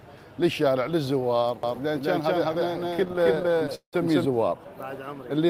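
From 1.63 s to 4.25 s there is a doubled audio track, most likely because the same signal reached the mix twice, once directly and once through a slower path. A second full-band copy trails the first by roughly a fifth of a second and is about as loud, so every onset is heard twice. The copy carries no added decay or room colour, and it cuts in and drops out abruptly at those two points.

Within that stretch, from 2.89 s to 3.95 s, the playback stalls repeatedly: a stutter. Packets arrived late or more slowly than they were played out, so the jitter buffer ran dry 22 times. At each stall the receiver stretched the last sound to fill the wait. The filled time adds up to 393 ms, about 37% of that second, with the longest wait lasting 178 ms. Nothing is lost, but the sound drags, catches and stumbles forward.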